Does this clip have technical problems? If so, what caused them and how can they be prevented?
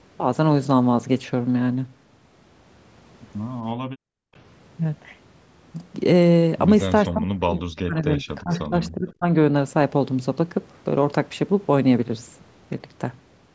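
Yes. From 3.87 to 4.34 s the background is gated by the echo canceller. While the far end plays through the loudspeaker, the canceller clamps the mic, and the room sound drops by about 37 dB for roughly 400 ms before coming back. A gentler suppression setting or comfort noise would prevent it.

From 7.09 to 9.26 s the speech is suppressed in double talk. Both sides talk at once, and the talker dips by around 30 dB in pieces, about 1.5 s in total, likely because the canceller can't tell the local voice from the loudspeaker echo and turns everything down. Better double-talk detection, or a headset, would prevent it.

At 7.76 to 7.80 s there's a brief echo leak, a faint copy of the voice arriving 356 ms late and sitting around 30 dB below the speech. The loudspeaker end's canceller likely let a scrap of its mic pickup through. Using a headset or lowering the speaker volume would prevent it.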